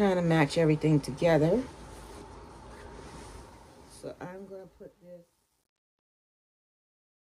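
From 3.24 s to the end at 7.25 s, the fade-out shows truncation distortion. Without dither, the stage keeps too few bits, which fits a 10-bit path. From 4.33 s it turns gritty.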